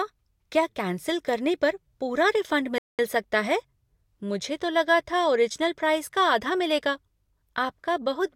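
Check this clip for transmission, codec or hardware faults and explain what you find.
There is one fault: a playback stall. At 2.78 s the speech cuts to silence mid-flow for about 206 ms and resumes at 2.99 s. The output likely went silent because the player ran short of data or its thread was blocked.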